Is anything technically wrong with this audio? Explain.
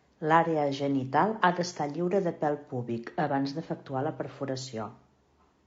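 Yes. Throughout the speech there is plainly audible low-delay AAC compression, likely from AAC-ELD at about 32 kbps. Its short frames resolve pitch harmonics poorly, so the voice sounds rough and grainy. A spectrogram shows smeared harmonics with noise filling the gaps and a thin, synthetic-looking top band.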